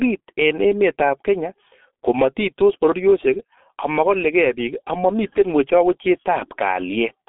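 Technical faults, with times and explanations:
Throughout, G.723.1 codec: heavy low-bitrate damage, consistent with 6.3 kbit/s, leaves speech muffled, hoarse and smeared; the spectrogram shows a hard cutoff near 3.7 kHz.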